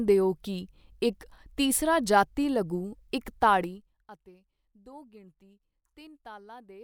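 From 3.61 to 4.05 s, just before "ਅਤੇ ਦੋ ਗਿਣਤੀ", there's zipper noise. The level drops about 25 dB in unsmoothed 1 dB steps, roughly fifty a second, so it buzzes with ticks.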